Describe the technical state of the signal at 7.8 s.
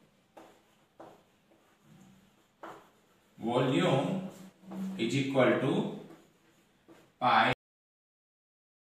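At 7.8 s the signal is dead: this falls inside a cut-off end that begins at 7.53 s and runs to the close of the clip at 8.83 s. The final stretch of audio was never written out or played, so the sound is severed mid-event at 7.53 s and falls straight to digital silence with no decay tail. What remains at 7.8 s is silence, not a quiet passage.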